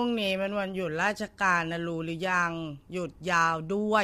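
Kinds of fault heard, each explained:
Low-delay AAC compression: grainy roughness throughout, likely from short-frame AAC-ELD coding near 32 kbps; spectrograms show blurred harmonics with noise filling the gaps.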